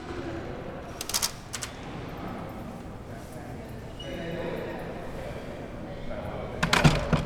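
Everyday sounds make up this clip, and from the start to 2.2 s every event is heard twice, the second copy arriving about 85 ms later at the same level. That is channel delay (doubling): one channel runs late by a long buffer, which fits a 4096-sample offset, and the two are summed to mono. Unlike room echo or reverb, the repeat doesn't fade, there is only one, and it carries no added room colour.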